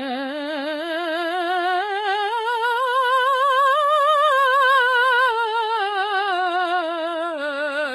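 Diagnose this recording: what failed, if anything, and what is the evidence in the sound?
The codec stage is the likely failure: this music carries HE-AAC compression throughout, with heavy damage. The treble is present but synthetic, rebuilt by copying lower bands upward under a coarse envelope, so its harmonics fail to line up with those below the crossover, giving a gritty, metallic top. Nothing reaches above about 11.8 kHz, and the damage fits a starved bitrate near 16 kbps. A plain low-pass filter would leave the top dull and clean rather than bright yet false.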